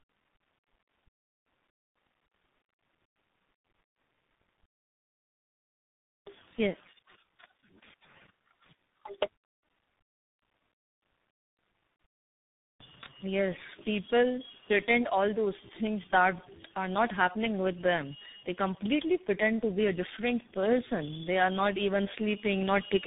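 Tandem speech coding runs throughout. The speech sounds rough, warbly and muffled, with nothing above 3.8 kHz. This fits three speech coders in a row, each recoding the last one's damage.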